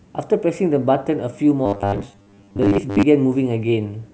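From about 1.66 s to 3.03 s the speech goes robotic, a rigid metallic buzz pitched at 100 Hz that still loosely tracks the talking. That's the classic robotic sound from repeated short buffers. Most of the stretch is the same tiny slice played over and over while real audio gets skipped, most likely because new data wasn't arriving often enough. A 100 Hz buzz fits a 10 ms chunk being looped.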